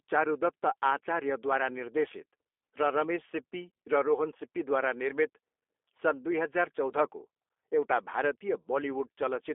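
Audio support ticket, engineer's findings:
G.729 codec damage throughout. Speech band-limited to about 300 Hz to 3.5 kHz, nothing above 3.6 kHz; plainly rough, synthetic timbre from pulse-excited filter resynthesis, consistent with an 8 kbit/s G.729A leg. The roughness rules out plain G.711 narrowband telephony, which would sound clean inside that band.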